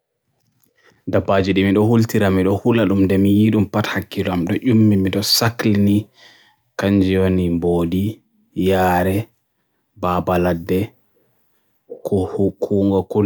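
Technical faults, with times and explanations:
No technical faults can be heard anywhere in the recording, and the signal holds steady throughout.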